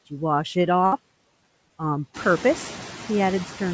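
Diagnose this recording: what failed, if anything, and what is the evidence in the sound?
Call processing: the noise suppressor pulls noise-dominated bands down by about 16 dB, frame by frame, throughout. The background dips between phrases and swells back under the speech, and the room noise rises roughly 2 seconds in.

Network: a burst of packet loss from 0.86 to 0.94 s. The receiver stretched the last sound for about 60 ms, fading it into a held buzz or hiss, then resumed further along, so roughly 60 ms of the speech is simply missing.

Network, with concealment in the decoder: short concealed packet loss at 1.68 to 1.72 s. About 20 ms never arrived, and 18 ms of synthesised continuation bridges the gap, heard as a brief smear or wobble before blending back. The G.722 band-limit above 8 kHz is unaffected.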